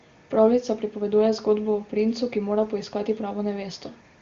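Speech carried over a wideband HD Voice channel, consistent with AMR-WB at a high rate near 23.85 kbit/s, with no technical fault to report anywhere in the recording.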